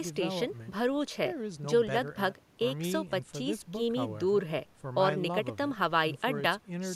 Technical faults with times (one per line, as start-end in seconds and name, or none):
none